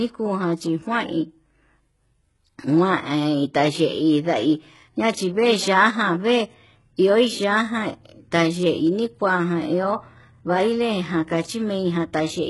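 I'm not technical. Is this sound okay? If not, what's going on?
No. Throughout the speech there's heavy HE-AAC compression, likely from saving at a very low quality setting. The treble is faked by copying lower sounds upward, so s sounds come out gritty, metallic or lispy, and nothing above 11.5 kHz survives.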